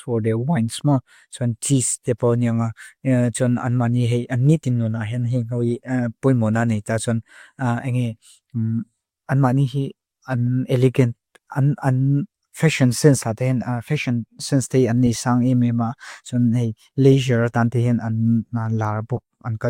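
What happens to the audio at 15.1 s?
A brief chirp-like blip cuts in from 15.07 to 15.09 s, between "sense day a" and "sang emema", peaking around -15 dBFS. It is a corrupt frame decoded: bit errors in a couple of compressed frames were played anyway, so misread gains threw energy onto the wrong frequencies.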